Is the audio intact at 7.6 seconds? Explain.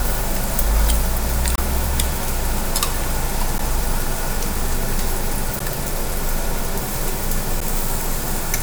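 No. At 7.60 s there is a gap at a join of encoded pieces: a silence of about 11 ms drops into otherwise continuous sound, with edges smeared by the codec. The audio was encoded in separate pieces and joined without trimming, so each piece's leading encoder delay and padded final frame remain as dead air. Unlike a packet dropout, nothing is skipped; the sound resumes exactly where it stopped, and such joins recur at a regular 2 s spacing.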